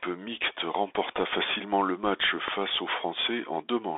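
The whole speech clip sits behind a Bluetooth CVSD headset codec, and the damage is plainly audible. The band runs from roughly 250 Hz to 3.6 kHz, with nothing at all above 3.8 kHz. That's the classic narrowband headset sound, and it fits a 64 kbps CVSD link. Because the coder tracks the waveform one up-or-down bit at a time with an adapting step, loud bright bits outrun the step and distort, sibilants come out scratchy, and a grainy hiss rides under everything.

At 1.18 to 1.20 s, just before "facilement le match", there's a single loud pop, about 15 dB above the speech. It's a sharp, brief click sitting on top of the talking, which carries straight on underneath. A second pop lands at 2.48 to 2.50 s, right after "facilement le match", again one hit at about 15 dB over the signal. Both are likely voltage spikes from a contact, static discharge or driver glitch getting summed into the line.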